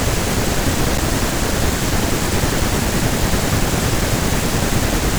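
At 0.98 s the speech suffers a CD skip: the laser lost its track and landed on a different turn of the spiral, so playback mutes for a few milliseconds, ticks, then resumes elsewhere. The waveform shows a brief flat gap and a discontinuity; the spectrogram shows a thin vertical broadband line.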